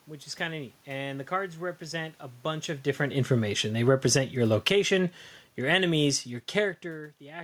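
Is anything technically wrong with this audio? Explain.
Yes. Automatic gain falling occurs from 3.11 to 4.86 s and again from 5.55 to 5.87 s. Each time, the automatic gain control judged the input too loud or its background noise too strong and lowered its gain, by about 8 dB in the first stretch and about 4 dB in the second. The speech sinks, and the room noise sinks with it. That sets these drops apart from the talker moving around 2.5 s and 6.5 s.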